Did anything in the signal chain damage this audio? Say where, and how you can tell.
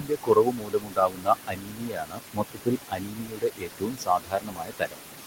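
Yes. The damage sits in call processing, at the noise suppressor. Noise suppressor artifacts run through the whole clip. The room noise sits about 9 dB below the speech. The suppressor pulls it down by about 18 dB in the gaps and lets it back up under the talker. That pumping floor is the giveaway. Its gain is set band by band, frame by frame.

The same stage also causes speech cut by the noise suppressor, from 0.0 to 4.98 s. Across about four seconds of that stretch, quieter parts of the speech are treated as noise. Soft consonants and word tails drop away with the background, by as much as about 19 dB at the deepest point. They sound swallowed rather than spoken softly. The suppressor could not tell low-level speech from the steady room noise, so it attenuated both.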